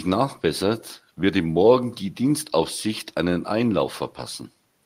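Nothing goes wrong anywhere in the speech here; there's no technical fault to point to at any moment.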